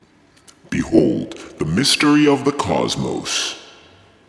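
No technical faults are audible anywhere in this recording of sounds.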